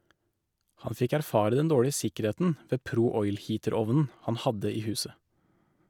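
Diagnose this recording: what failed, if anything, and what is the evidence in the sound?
Nothing in the recording points to a failure at any stage of the chain. The speech carries no audible evidence of a problem anywhere from capture to playback.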